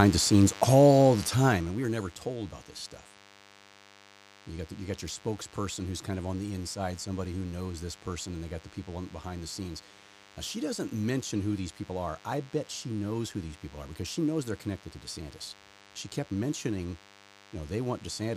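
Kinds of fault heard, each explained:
DECT cordless phone buzz: A thin, steady buzz runs under the speech for the whole clip. It repeats at 100 Hz and carries many harmonics. A nearby DECT handset or base sends a radio burst every 10 ms, and the audio circuit rectifies it. The buzz sits roughly 20 dB below the speech.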